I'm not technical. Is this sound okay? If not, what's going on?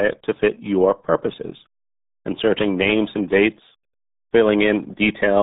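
No. From start to finish the speech has the sound of the RealAudio 14.4 codec, an old speech format built for dial-up modems. Nothing above about 3.8 kHz gets through, so the voice sounds muffled, and the heavy squeezing adds a bubbly, gargling quality. A plain phone-line filter would also sound muffled, but it would stay smooth. This gargle is what marks it as a codec problem.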